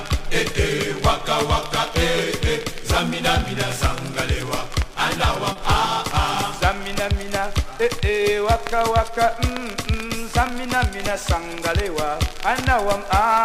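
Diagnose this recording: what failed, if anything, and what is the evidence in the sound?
Network stage: short concealed packet loss at 5.52–5.56 s and 11.09–11.11 s. Each gap shows up as a brief smear where the decoder carried the previous sound across the missing 30 ms and 10 ms.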